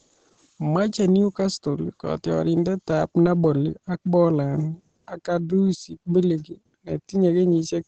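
Throughout, the speech sounds muffled and hoarse with nothing above 9.1 kHz, likely Opus compression in its speech mode at a low bitrate, roughened rather than swirling like MP3.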